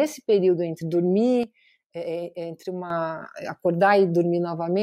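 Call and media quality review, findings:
Sudden gain jump, 1.43 s to 2.90 s: speech and background noise drop together by about 9 dB at 1.43 s, then step back up at 2.90 s, with no fade either way. Likely a gain setting or bit shift applied without a ramp. Waveform: abrupt rectangular dip in the envelope, with hard vertical edges at both boundaries. Spectrogram: the whole band, including the noise floor, darkens uniformly for that span.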